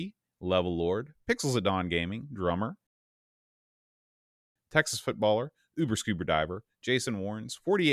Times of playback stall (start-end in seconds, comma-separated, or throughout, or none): 2.87-4.56